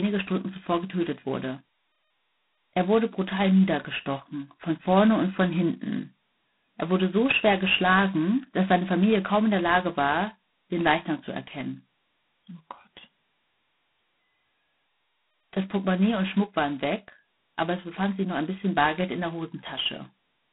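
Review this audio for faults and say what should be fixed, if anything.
A harsh, rasping hiss rides on the speech throughout, rising and falling with its level, and nothing sounds above 3.9 kHz. That is heavy G.726 ADPCM damage, consistent with 16 kbit/s. Capture over a wideband path, or use G.726 at 32 kbit/s or above.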